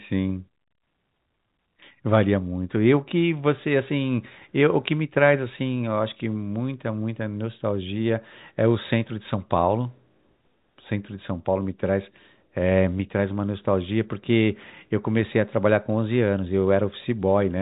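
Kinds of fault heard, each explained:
No faults are present in this speech: it carries the narrow band of G.711 telephone coding, with nothing above 4 kHz and only a faint quantisation noise that rises and falls with the signal level.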